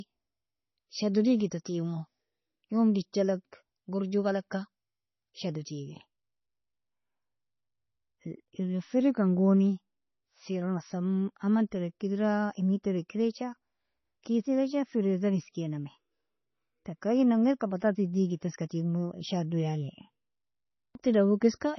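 From start to finish the speech carries heavy coding damage that is likely MP3 compression at a bitrate around 24 kbps. With so few bits, the encoder drops weaker frequency components, and they flicker in and out between frames. This gives the voice a watery, swirling texture, metallic chirps on s sounds and smeared attacks. The treble is cut off entirely, with nothing above 6 kHz, so the audio sounds dull and band-limited.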